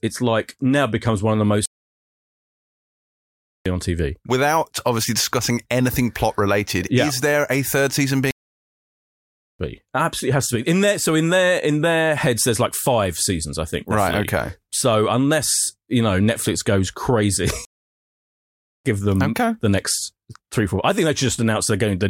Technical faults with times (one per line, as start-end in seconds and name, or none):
1.66-3.66 playback stall
8.31-9.59 playback stall
17.65-18.85 playback stall